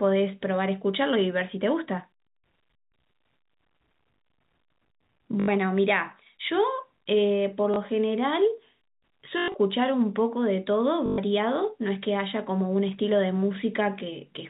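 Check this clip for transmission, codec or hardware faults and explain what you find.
There is one fault type: packet loss with the last packet repeated. It occurs four times, at 5.40–5.48 s, 7.74–7.76 s, 9.38–9.54 s and 11.06–11.18 s. Lost packets were replaced by replaying the previous one. The longer runs buzz robotically, which fits 20 ms packets. The speech is carried through G.711 telephone coding, which caps the band at 4 kHz.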